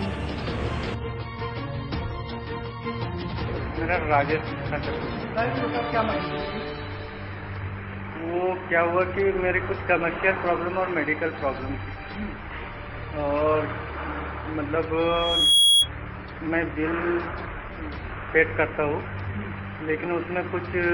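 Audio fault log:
14.97–15.89 s, loudspeaker feedback squeal: the microphone is hearing the loudspeaker it drives, and around 3.3 kHz the gain round that loop climbs above one, so that frequency keeps feeding itself. A single piercing tone swells up over roughly half a second until it sits about 10 dB above the rest of the sound. It holds there as a steady squeal and cuts off at 15.89 s.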